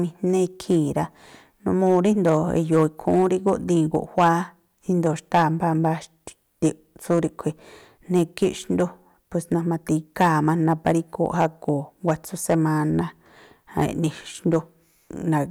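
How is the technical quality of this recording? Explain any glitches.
The recording has one real problem: it's clipped all the way through. Hard clipping runs the full length of the speech, with the level pushed about 7 dB past what the chain can pass, so the loudest peaks, roughly one percent of samples, get sliced flat. Those squared-off tops throw extra harmonics high up the spectrum, which you hear as a gritty crackle riding on the louder syllables.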